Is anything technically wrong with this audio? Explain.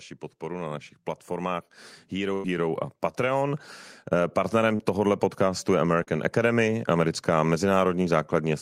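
Yes, there are several faults. From 0.39 to 4.63 s the automatic gain rising is audible: the gain control judged the input too quiet and raised its gain by about 10 dB over roughly four seconds, so the speech and the background noise behind it swell together rather than the voice alone getting louder.

At 2.33 to 2.46 s there is a burst of packet loss, about 100 ms of audio that never arrived in time. The receiver extended the last sound for about 100 ms and faded it down, leaving a held buzz or fading hiss where that stretch should be, then picked up again later in the speech with the lost portion simply absent.

Three short concealed packet losses follow, at 3.12 to 3.16 s, at 4.76 to 4.81 s just before "podcastu je", and at 6.03 to 6.09 s just after "podcastu je". Each time some 20 to 40 ms failed to reach the decoder, and the receiver patched the hole by continuing the preceding sound before blending back in, which is heard as a brief smear or wobble in the speech.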